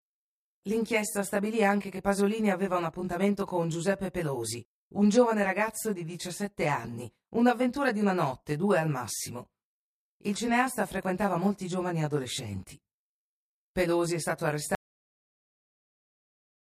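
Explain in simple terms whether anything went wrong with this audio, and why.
Two things went wrong. First, a channel delay: one side of the stereo recording runs roughly 20 milliseconds behind the other, and when the two are combined, they cancel each other at evenly spaced pitches starting around 30 Hz. This comb filtering makes the speech sound rough or slightly doubled throughout.

Second, an audio dropout to silence: at 14.75 seconds, right after "è stato", the incoming sound was lost, most likely through a disconnected or failed input, while recording continued. From there to the end there is complete silence, with no background hiss at all.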